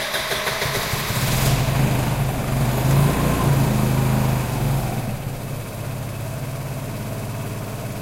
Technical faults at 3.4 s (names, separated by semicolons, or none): none